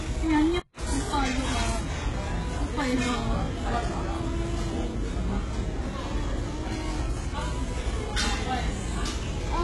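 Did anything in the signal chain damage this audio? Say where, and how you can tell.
Yes. From start to finish the upper range sounds synthetic: the top end stays bright but grainy and metallic, and nothing at all above 11.4 kHz. The damage is heavy and constant, which places it at the codec stage. The likely cause is HE-AAC compression at a very low rate, something like 12 kbps. The treble is regenerated from copied lower bands, so its harmonics never match the real spectrum.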